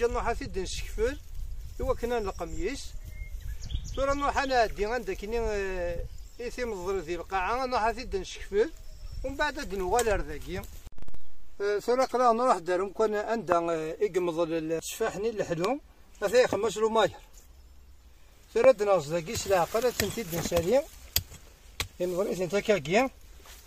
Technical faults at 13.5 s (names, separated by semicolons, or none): loud pop